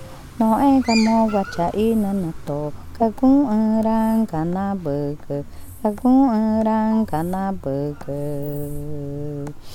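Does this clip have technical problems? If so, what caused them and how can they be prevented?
No, no technical problems can be heard here.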